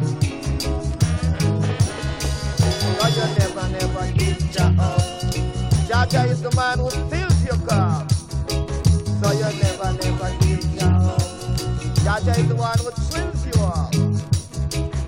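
Whole compressed frames are skipped at two points, lost from the file or rejected by the decoder as damaged, so playback jumps straight past them. At 5.31 s roughly two frames go missing and about 50 ms of audio vanishes; at 8.81 s a single frame drops, cutting about 20 ms. The jump sizes fit frames of about 23 ms. Each join is heard as a brief glitch where the audio jumps ahead.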